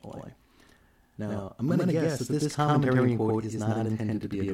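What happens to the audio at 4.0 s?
At 4.0 s the sound carries the channel delay (doubling) that runs through the whole clip. One channel arrives about 93 ms late, which fits a 4096-sample buffer, and the two are summed to mono, so every syllable is followed by an equal-level copy that sounds like a slap echo. On a waveform each burst has a matching twin about 93 ms later; on a spectrogram every onset appears twice, evenly offset.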